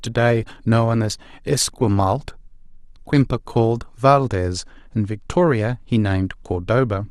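A speech recording whose first 4.0 s sound dull and smeared, with thin treble and stronger coding artefacts, before clarity jumps up abruptly with no gap. That points to an adaptive stream starting at a low bitrate, roughly 24 kbit/s Opus, then stepping up to about 64 kbit/s.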